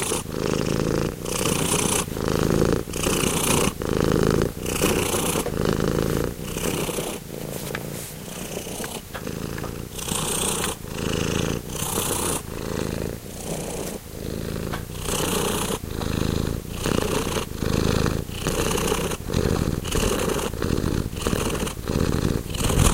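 From 19.02 s to the end, the audio runs as a time-stretched section, squeezed to about 1.36 times its normal pace. The jump in tempo is abrupt, and the sped-up material sounds rushed, with short pieces seemingly dropped to shorten it. This is likely from software fitting the passage to a set length. Unlike a plain speed-up or resampling error, which would raise the pitch along with the tempo, the pitch here stays unchanged.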